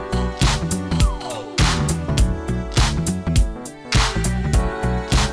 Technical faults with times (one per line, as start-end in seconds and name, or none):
none